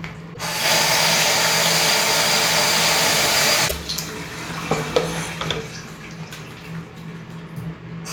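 At 0.33 s and again at 3.67 s, the audio skips forward with a 44 ms glitch, likely a broken MP3 bit reservoir: after missing frames, the next frames decode from borrowed bytes that are wrong.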